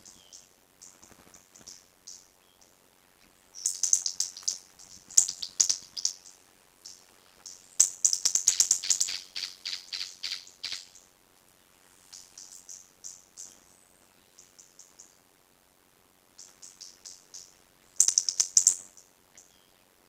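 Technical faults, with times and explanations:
Throughout: block size mismatch (padded). Each block, likely 256 written samples, is zero-filled, giving a 91.9 Hz buzz and slowing sound to 0.533 speed at normal pitch.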